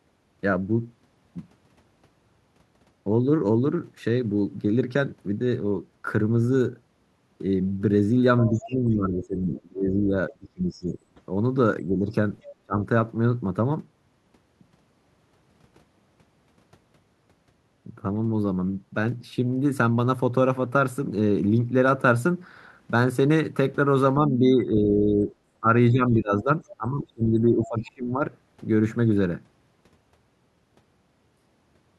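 At 8.39 to 8.69 s a faint second voice, about 15 dB under the talker, bleeds in. It returns as brief scraps at 12.42 to 12.52 s, about 20 dB down, and at 26.67 to 26.74 s, about 25 dB down. This is the other side's voice leaking through, likely loudspeaker playback that the echo canceller failed to remove from the microphone.

From 8.49 to 10.98 s the talker's level sags, by up to about 25 dB over roughly two seconds. Shorter dips follow at 11.84 to 12.12 s (about 10 dB) and 12.65 to 12.75 s (about 30 dB). Longer ones occur at 24.16 to 25.28 s (about 10 dB) and 25.6 to 28.23 s (about 20 dB). This is speech suppressed in double talk, likely the canceller turning both the talker and the echo down while both sides spoke.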